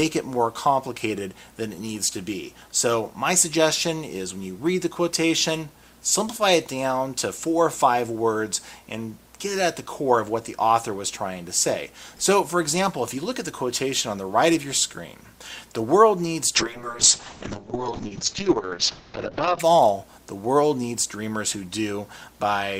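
A call bitrate drop runs from 16.56 to 19.65 s. The encoder's bit budget collapsed, consistent with a fall from about 64 kbps to 6 kbps, so the sound turns coarse and watery, its top end cut from 20 kHz to 8 kHz.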